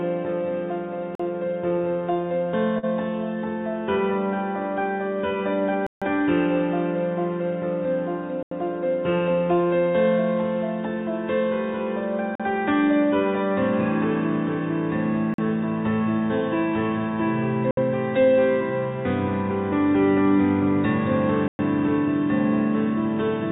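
Blocks of digital silence begin at 1.15 s, where the sound drops to silence for about 43 ms. The output buffer was probably not filled in time, so a run of samples came out as zeros with no fade, leaving a short hole. A 43 ms length fits a 2048-sample buffer.

Short concealed packet loss follows at 2.78 s. About 40 ms of audio never reached the decoder in time, and the receiver continued the previous sound for roughly 44 ms before blending back into the real signal. It is heard as a brief smear or wobble rather than a gap.

The dropouts return at 5.87 s for about 151 ms, a clear hole. At 8.43 s the gap lasts about 85 ms, which fits a 4096-sample buffer. Further 43 ms holes fall at 12.35 s and 15.34 s. The last two are a 63 ms gap at 17.71 s and a 111 ms gap at 21.48 s. Throughout, the audio carries nothing above 4 kHz, consistent with a narrowband telephone codec on the call path.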